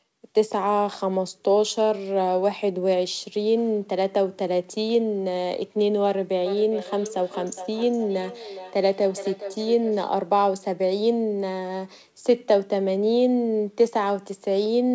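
From 6.46 to 10.15 s the speech comes back on itself in repeats spaced roughly every 0.4 s, each return thinner and more ringing than the last, the loudest sitting about 13 dB below the direct speech. This is feedback echo between two devices: a second device in the same room plays this microphone's audio, the microphone picks it up again, and its echo canceller cannot remove sound it did not play itself. The speech stops above 8 kHz, as expected for the call path.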